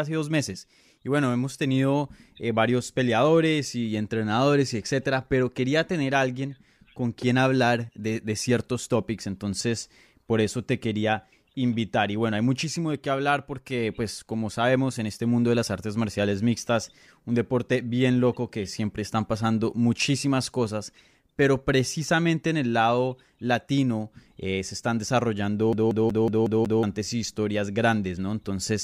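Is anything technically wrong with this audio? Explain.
Yes. From 25.73 to 26.83 s the speech catches in a CD stuck on one turn: a scratch keeps throwing the laser back one track, so the same 184 ms slice repeats six times, each separated by a brief mute, giving a fast, even stutter before "historias grandes".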